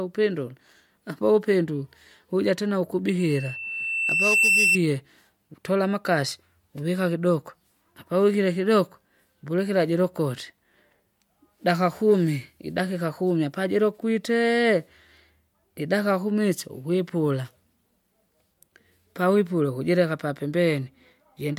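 Right after "vuja tena", from 3.19 to 4.79 s, a single tone near 2.7 kHz swells over roughly one and a half seconds to about 5 dB above the speech. This is loudspeaker feedback squeal: the microphone hears its own loudspeaker, and at that frequency the loop gain exceeds one.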